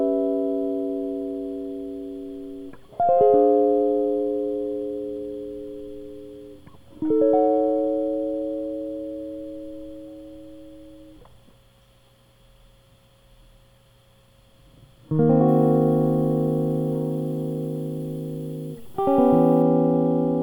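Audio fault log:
15.48–19.62 s, pre-emphasis left on: an FM-style 50 µs treble boost lacks its matching cut, so music turns thin and bright, about 10 dB hot at 10 kHz; the spectrogram's upper bands visibly brighten.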